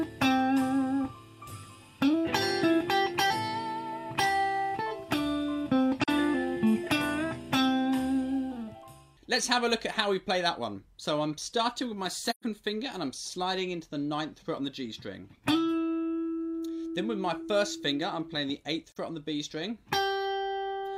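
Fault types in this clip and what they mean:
AAC frame loss with muting: missing frames were decoded as silence, and the overlapping windows fade the sound out and back in. Dips near 6.04 s and 18.89 s, about 43 ms each, fit single lost frames; a soft-edged 128 ms hole at 12.30 s fits three.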